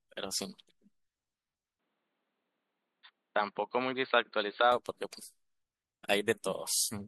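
The input likely switched to a poorer device from 1.79 to 4.72 s. Nothing above 4.6 kHz passes, so the speech turns dull and boxy, then abruptly clears.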